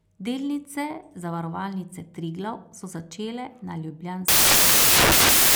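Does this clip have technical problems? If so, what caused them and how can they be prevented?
Yes: from 4.28 s to the end, right after "so začele na", the speech turns into loud, harsh broadband noise. These are samples built from the wrong bytes, misassembled so the low bits dominate. Reading samples with the correct byte order and alignment prevents it.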